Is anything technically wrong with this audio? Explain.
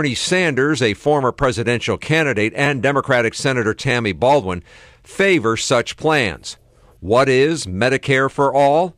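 Yes. From 0.16 s to 8.93 s there is a click every 1.25 s, likely clock drift buffer slips. Two clocks differing by a few hundred ppm force about 30 samples to be dropped or repeated. Unlike random dropouts, the ticks keep strict, metronomic spacing.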